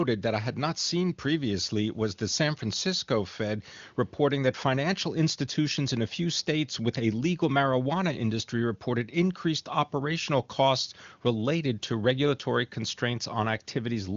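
Nothing here needs flagging: the speech comes over an AMR wideband (HD Voice) link at 23.85 kbit/s, the codec's top rate, with the band running out at about 7.3 kHz as expected, and no fault turns up anywhere along the way.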